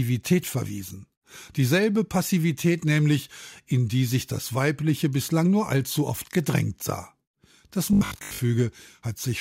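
From 7.93 to 8.45 s the speech becomes a rigid, metallic buzz pitched at 50 Hz: robotic sound from repeated short buffers, likely a 20 ms chunk replayed through most of the stretch. Unlike mains hum, the buzz roughly follows the speech rather than running steadily underneath.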